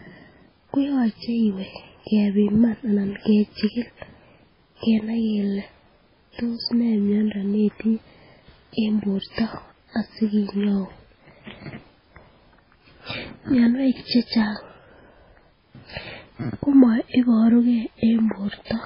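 Speech, and the whole way through it has the watery, swirly sound of heavy MP3 compression, likely from a very low bitrate somewhere near 16 kbps. Nothing comes through above about 5.3 kHz, so the top end is gone, s sounds turn chirpy and metallic, and onsets smear.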